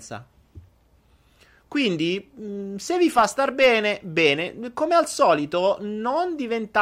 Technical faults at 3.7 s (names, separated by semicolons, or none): none